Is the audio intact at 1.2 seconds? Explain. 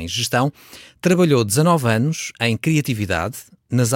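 Yes, the speech at 1.2 seconds plays through intact, with no dropout, click, distortion or other fault audible at that moment.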